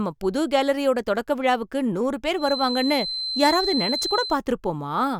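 From 2.34 to 4.40 s, the loudspeaker-to-microphone loop was likely sitting right at the edge of feedback, giving a feedback whistle: a thin, steady 4.1 kHz tone that holds without building up, swelling and fading slowly in level a little below the speech.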